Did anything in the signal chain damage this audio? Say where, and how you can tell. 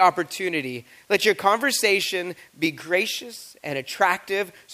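No, nothing in the signal chain damaged this audio.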